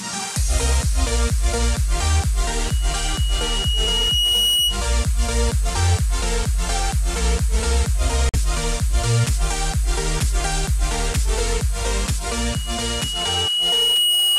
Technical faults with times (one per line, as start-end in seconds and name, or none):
2.64-4.81 loudspeaker feedback squeal
8.29-8.36 Bluetooth dropout
12.29-14.39 loudspeaker feedback squeal